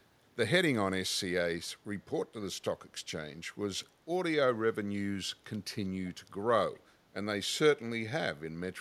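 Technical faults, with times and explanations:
6.06–6.11 s and 6.75–6.80 s, echo leak: faint scraps of speech return 263 ms late, roughly 30–35 dB down, likely a far-end canceller's residue. They are discrete delayed copies, unlike smooth room reverb.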